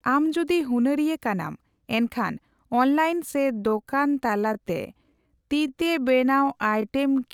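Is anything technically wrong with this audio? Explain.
Yes. From 3.27 s to the end of the clip at 7.34 s, the speech is a time-stretched section, slowed to about 0.73 times its original pace while the pitch stays the same. The likely cause is software lengthening the audio by repeating short pieces, which makes it drag. On a spectrogram, the harmonics keep their spacing, but syllables spread wider. On the waveform, the envelopes stretch out.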